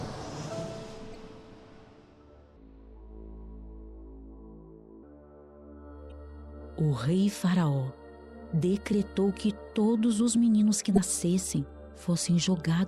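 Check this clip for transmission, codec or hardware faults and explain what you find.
Two kinds of fault are present: damaged data in a compressed stream, heard three times, and one section at the wrong speed.

Damaged compressed data appears at 1.11 to 1.16 s, 6.08 to 6.12 s and 10.94 to 10.98 s. Each lasts about 40 ms. Corrupted bytes make the decoder misread frames and hunt for the next header. Each is a brief chirp, squawk, click or short hole.

A section at the wrong speed runs from 2.56 to 5.03 s. It plays at 0.741 times normal speed. Pitch drops by about five semitones, and the sound becomes deep and drawn out. The likely cause is an editor or player applying the wrong clock rate.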